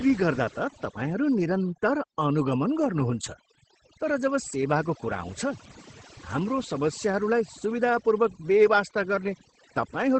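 Overdone noise removal runs from start to end of this speech clip. A noise reduction process set far too aggressively has pulled individual frequency bands down or out wherever they sat close to its noise estimate, and the softer parts of the voice were caught along with the noise. The background between phrases falls to near silence scattered with twinkling, chirpy specks.

Opus voice compression is also present throughout, in its SILK linear-prediction mode at wideband. The encoder has modelled the voice as a predicted spectral envelope plus a coarsely quantised excitation signal, and nothing survives above about 8.5 kHz, so the top air and sibilant sparkle are gone. The coding damage is plainly audible: a muffled, slightly hoarse and faintly robotic quality, consistent with a low bitrate in the region of 12 kbps.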